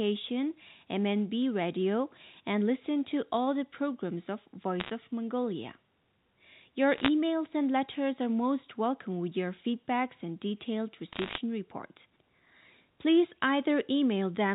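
Sharp ticks and crackle break over the speech from 4.80 to 4.90 s after "all the programs of", from 6.96 to 7.08 s, and from 11.13 to 11.38 s after "your feedbacks and detailed". These are bit errors on a digital phone line, with roughly one bit in a hundred flipped (about 0.7 percent in the middle burst) on the 64 kbps A-law G.711 telephone path. Each flipped bit corrupts one sample, and hits on the sign or high-order bits produce the loudest clicks.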